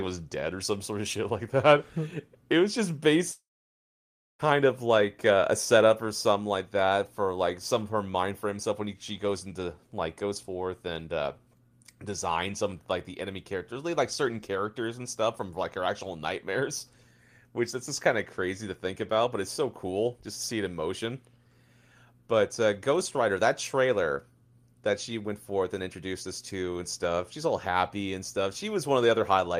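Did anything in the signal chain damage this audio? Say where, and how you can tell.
Yes. From 3.31 s to 4.42 s a short fading buzz is followed by about 0.96 s of near-silence, and the speech resumes with about 1.08 s missing. This is likely a long network dropout: concealment extended the last sound before giving up, which an ordinary edit or mute wouldn't do.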